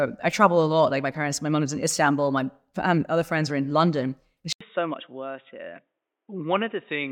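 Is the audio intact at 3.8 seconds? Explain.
Yes, the speech at 3.8 seconds runs intact, with no dropout, click, distortion or other fault audible at that moment.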